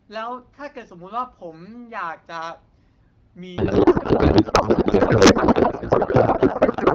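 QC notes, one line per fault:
3.57 s to end, codec payload misread: the speech gives way to garbled noise and warble that barely tracks it, consistent with octet-aligned AMR-WB frames parsed as bandwidth-efficient. On a spectrogram, formant structure dissolves into smeared, erratic energy; the waveform loses its syllable envelope.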